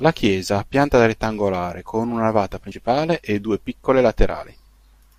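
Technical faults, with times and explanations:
2.71 to 2.77 s, compressed frames skipped: between "rettangolare con una navata" and "e due piccole" the speech jumps ahead. A few whole 20 ms frames were never played. About 70 ms is lost.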